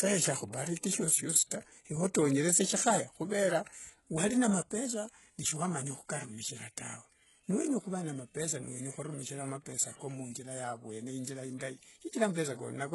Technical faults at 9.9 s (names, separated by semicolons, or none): HE-AAC compression